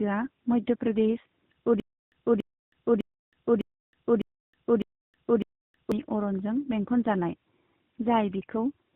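From the start to the end, the speech carries tandem speech coding. It sounds rough, dull and warbly. Nothing is heard above 3.8 kHz. Two speech coders ran one after the other. The second had to code the damage left by the first, so the errors pile up. The sound fits a GSM full-rate leg handed over a G.711 link into AMR-NB at 12.2 kbit/s.

From 1.8 s to 5.92 s there is a stutter with silent gaps. A 284 ms fragment plays, then about 319 ms of dead digital silence follows. The cycle repeats every 604 ms, seven times over. Playback then resumes at "अरनजों बेंखनजानाय". The stream likely stalled and replayed its last buffer on each retry. The audio that belonged in those four seconds is gone.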